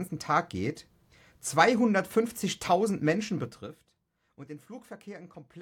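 Zipper noise appears from 3.40 to 3.80 s, just before "und den". The speech level drops by roughly 15 dB, but instead of gliding down it falls in hard 3 dB steps, around fifteen per second, with no smoothing between them. Each abrupt jump in gain puts a small click into the waveform, so the fade is heard as a rapid ticking or zipping laid over the speech for as long as the level is moving.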